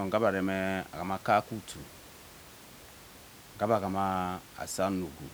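Speech with no technical faults; only faint room noise.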